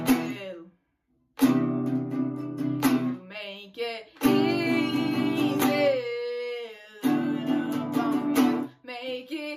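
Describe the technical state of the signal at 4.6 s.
At 4.6 s the signal is intact, with no dropout, clipping, distortion or other technical fault audible at that moment.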